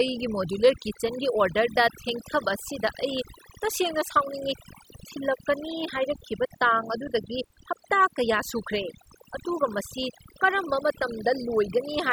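From start to finish the speech sits over a near-silent background flecked with twinkling specks: overdone noise removal, suppressing any frequency band that resembles noise, including quiet speech detail.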